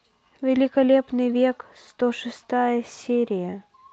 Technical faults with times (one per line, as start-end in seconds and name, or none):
none